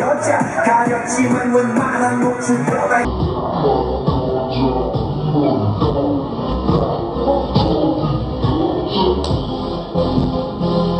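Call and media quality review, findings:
Section at the wrong speed, 3.05 s to end: playback drops to 0.52x, pitch about ten semitones lower, everything slow and deep. Likely a resampler or player clock mismatch. Tempo and pitch fall together, which rules out a pitch-shifter (tempo intact) and time-stretching (pitch intact).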